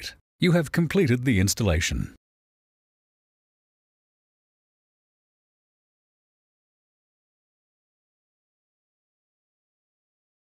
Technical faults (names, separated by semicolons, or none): sample clock jitter